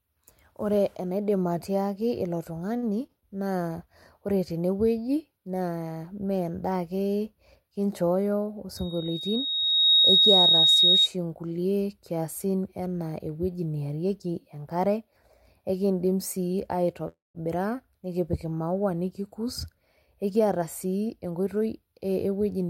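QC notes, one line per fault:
2.77–3.25 s, repeated stalls (stutter): three short gaps, longest 49 ms, are filled by repeating the previous sound, so the waveform shows copied cycles and the audio drags.
8.76–11.08 s, loudspeaker feedback squeal: a 3.8 kHz tone rises over about a second to roughly 10 dB above the speech, a bright horizontal spectrogram line.
16.52–16.57 s, short stall from a late packet: a late packet leaves 16 ms to fill, so one sound is held slightly long with repeated waveform cycles.
17.08–17.38 s, call audio freeze: the audio halts, a fading buzz gives way to about 180 ms of near-silence, then resumes intact; likely delayed packets emptying the buffer.
19.75–21.67 s, jitter buffer speed-up: small pitch-period slices totalling about a fifth of a second are cut, so the audio runs 109% fast at unchanged pitch, with a compressed spectrogram.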